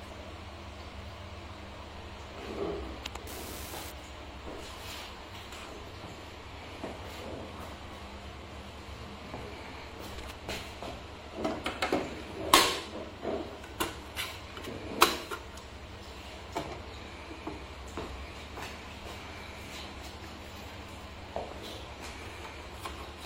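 From 3.27 to 3.90 s there is an unreliable data bit: one line in the digital path is marginal, so its bit comes out wrong in a random share of samples across that stretch. Each wrong bit offsets the sample by the same fixed amount, producing a spike of identical size wherever it lands. Together these spikes form a steady crackle or fizz laid over the sound for about 0.6 s.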